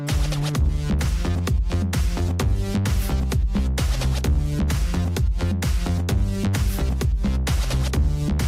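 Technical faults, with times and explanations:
No technical faults can be heard in this clip. There is nothing here that calls for a time or an explanation.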